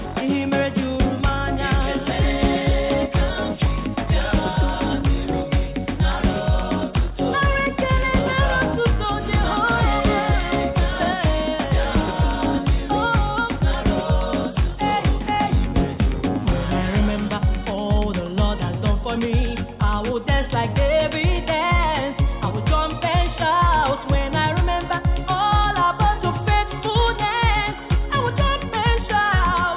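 Nothing in this audio is technically wrong, and no faults can be heard anywhere in it.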